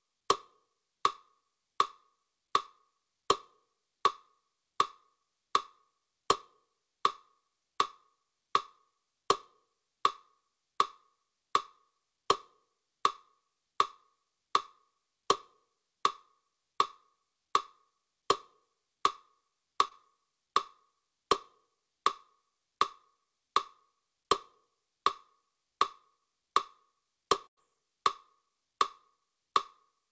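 Audio carried over a call link whose content stops sharply at 8 kHz, which fits a G.722 codec at 64 kbps, shows two packet-loss events. At 19.88 to 19.93 s, a short concealed packet loss produces a brief smear where the receiver stretched the preceding sound over a small gap. On a spectrogram, this appears as a thin band of repeated, slightly blurred texture. At 27.47 to 27.59 s, a burst of packet loss is heard as a held, fading continuation lasting about 100 ms before the audio resumes further on. A spectrogram shows frozen harmonics or noise dimming, then an abrupt jump into new material.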